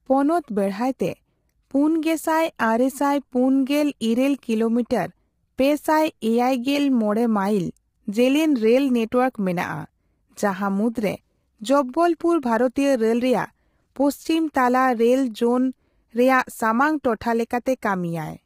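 A speech recording where the voice sounds rough and grainy throughout, with noise filling the gaps between harmonics and a thin, artificial-sounding top band. This is likely low-delay AAC compression, whose short frames resolve pitch poorly, and the heavy damage fits a low bitrate of around 24 kbps. At 17.03 s, a sharp attack is preceded by a brief hiss about 11 ms long and sounds smeared. This is pre-echo: the codec spread the quantisation noise meant for the loud onset across the quiet moment just before it.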